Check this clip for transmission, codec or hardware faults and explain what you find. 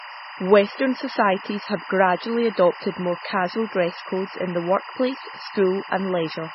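Two faults run through the whole speech clip: timecode bleed and heavy compression damage.

Timecode bleed runs from start to end. Linear timecode has leaked in as a square wave switching near 1 and 2 kHz, about 15 dB below the speech. Its pacing suggests 23.976 fps code. It sounds like a constant chirping warble, and a spectrogram shows steady bands at both pitches.

Heavy compression damage is also present throughout. A hard ceiling at 5.6 kHz leaves the spectrogram empty above it, and weak components blink in and out as scattered patches. Speech sounds watery and swirly, with smeared onsets. The likely cause is MP3 encoding at a very low bitrate, consistent with roughly 16 kbps.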